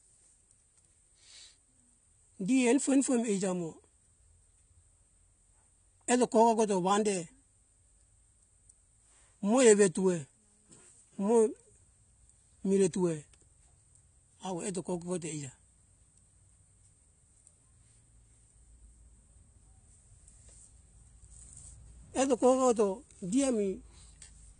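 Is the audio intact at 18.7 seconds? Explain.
No. Likely AAC compression, at what sounds like about 32 kbps, runs throughout. It cuts everything above 9.7 kHz and coarsely quantises the rest, leaving the speech dull, smeared and fizzy.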